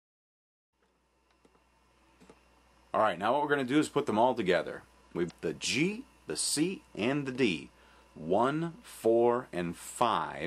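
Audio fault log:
0.70–0.73 s and 5.27–5.31 s: damaged data in a compressed stream. Each is a quick chirp, squawk, click or short hole, about 40 ms long, where corrupted bytes in the stream make the decoder misread those frames and lose sync, then lock back on at the next valid frame header.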